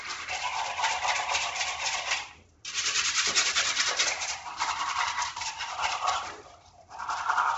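Throughout the clip the sound carries what is likely Bluetooth LC3 compression, the Bluetooth LE Audio transform codec running at a low bitrate with 10 ms frames. Nothing reaches above about 7.8 kHz, and the upper band that remains has been largely zeroed and refilled with noise, giving a breathy, grainy edge. On a spectrogram this shows as a hard ceiling near 7.8 kHz, with mottled, speckled texture below it repeating in 10 ms blocks.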